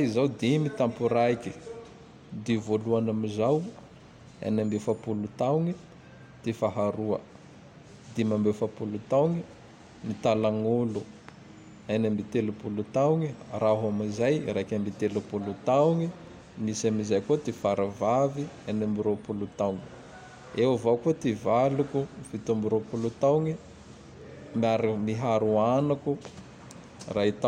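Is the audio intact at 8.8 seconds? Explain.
Yes, the speech runs through 8.8 seconds without any audible fault at that point.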